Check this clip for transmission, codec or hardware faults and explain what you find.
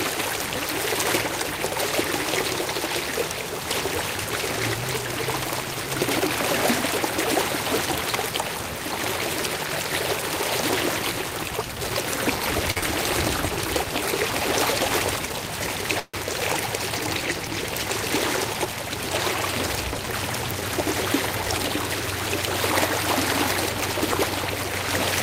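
The clip, a recording of everyday sounds, shows four kinds of network fault: a late-packet stall, a concealed packet loss, two jitter buffer speed-ups and a call audio freeze.

At 12.71 s a short stall from a late packet occurs. A packet arrived behind schedule, the jitter buffer ran dry, and the receiver held the last sound for 45 ms before resuming exactly where it stopped. Nothing is lost, but the sound in progress is drawn out briefly, with a faint buzzy or dipped quality, and everything after it sits 45 ms later.

Straight after, from 12.78 to 12.84 s, comes a short concealed packet loss. About 40 ms of audio never reached the decoder, and the receiver covered the hole with 41 ms of synthesised continuation, extending the pitch of tonal material or shaped noise otherwise, then blending back in. Running on from the stall, it makes the moment sound smeared or slightly wobbly, and any brief sound there may be gone.

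From 15.29 to 15.77 s a jitter buffer speed-up appears. The buffer was holding more audio than its target, so the receiver trimmed small pitch-period-sized pieces over and over, removing roughly a twentieth of a second in total. Playback runs at about 108% speed at unchanged pitch, so the sound feels hurried. A second speed-up from 18.10 to 19.93 s runs at about 105% and removes around a tenth of a second. This one is gentler but longer, giving a steady sense of rushing.

A call audio freeze follows from 15.99 to 16.16 s. The sound stops moving forward and the last moment is stretched into a fading buzz or hiss for 142 ms, including about 30 ms of silence, before the audio picks up where it left off. This is likely packets held up in transit emptying the jitter buffer. Almost nothing is missing, but a 142 ms gap is inserted into the flow.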